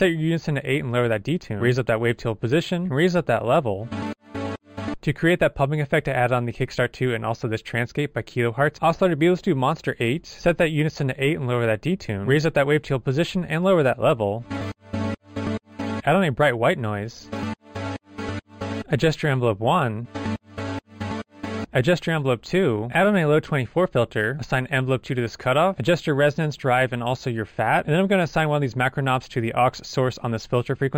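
Imaging from linear upsampling runs throughout. Straight-line interpolation, pointing to an 11 kHz to 48 kHz rate rise, leaves mirrored copies roughly 30 dB down between 5.5 and 11 kHz, adding a faint metallic shimmer above a dulled top rather than aliasing's inharmonic fold-down.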